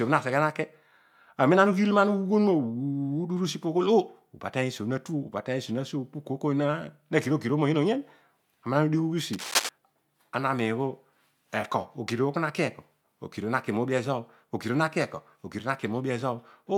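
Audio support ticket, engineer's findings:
Cable scratch noise, 9.33–9.69 s: contact resistance fluctuating, likely a worn cable or connector being moved. This puts dense, uneven scratching bursts over the speech, roughly as loud as it.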